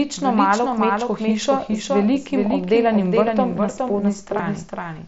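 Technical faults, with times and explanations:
Throughout: doubled audio track. A second full-band copy of the speech trails the original by roughly 0.4 s, a few decibels quieter, with no decay or room colour, so it sounds like a dry, out-of-step echo. The likely cause is a slower second capture path mixing in alongside the first.
2.24 s and 4.38 s: concealed Bluetooth headset packet loss. Gaps of 7.5 ms and 15 ms, consistent with one and then two lost packets, were patched by repeating matching waveform from just before. The single loss is nearly hidden, while the two-packet run gives a brief buzzy tone with a small warble where real audio returns, within the light mSBC wideband sound.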